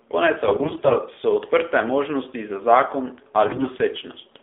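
AMR narrowband mobile codec runs through the whole clip. The speech is squeezed into a telephone band of about 250 Hz to 3.5 kHz, and the low-bit pulse model makes the voice plainly buzzy and synthetic, which fits one of AMR's lower modes near 7.4 kbps.

AMR bit errors strike from 0.44 to 0.99 s and again from 3.46 to 3.68 s. Corrupted low-priority bits misplace the excitation pulses and skew pitch, gain and spectral detail. Pitch and level hold, but the voice turns hoarse and gargly, harsher in the second burst.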